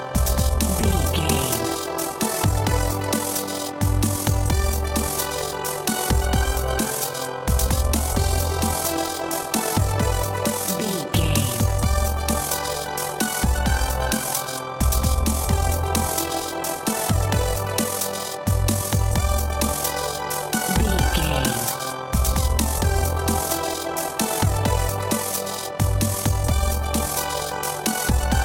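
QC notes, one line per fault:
Throughout: overlap-add ripple. The level swells and dips by about 6 dB around 40 times a second, producing a fast, rough flutter. The audio was cut into overlapping windowed frames and rejoined with an overlap whose windows do not sum to a steady gain, so the level sags once per frame, which fits a hop of about 25 ms. Unlike a deliberate tremolo, the flutter stays locked to the frame rate and never changes speed.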